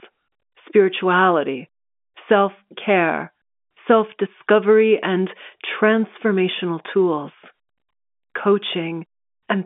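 No faults detected in this speech; it sits in a normal G.711 A-law telephone band of roughly 200 Hz to 3.5 kHz, with nothing above about 3.7 kHz.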